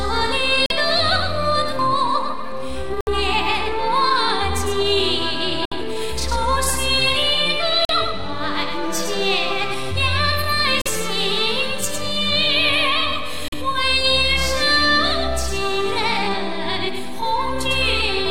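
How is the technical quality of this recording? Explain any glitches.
The recording has six short gaps where the sound cuts out completely: 0.66–0.72, 3.01–3.09, 5.65–5.73, 7.85–7.91, 10.82–10.87 and 13.48–13.54 s. Each hole is either about 43 ms or 64 ms long, and the sound comes back further along rather than where it stopped. That pattern is likely a Bluetooth dropout: audio packets arrived too late for the headphones, which fits two or three lost packets per gap.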